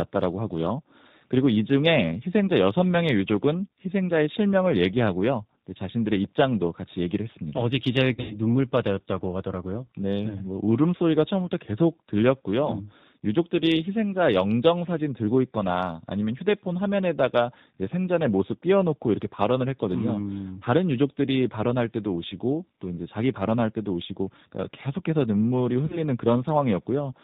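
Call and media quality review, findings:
G.729 codec throughout: band-limited at 4 kHz, rough, slightly synthetic timbre, plainly audible; filter-plus-pulse rebuild at low rate, consistent with 8 kbit/s.

VoIP packet loss concealed by the speech codec, 8.14–8.38 s and 25.86–26.00 s: decoder extrapolates from its last pitch and filter, producing a fading buzzy tone or coloured noise; first event about 120 ms lost, longest run 80 ms.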